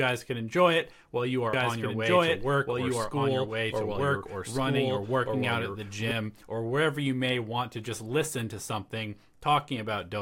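A second capture path or an out-of-step edit likely mixes the speech in twice, producing a doubled audio track from 1.53 to 6.11 s, after "enjoy it while you" and before "or wherever you may". A dry, full-band copy at roughly equal loudness trails by about a second and a half, starting and stopping abruptly.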